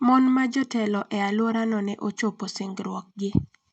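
No technical faults can be heard in the speech.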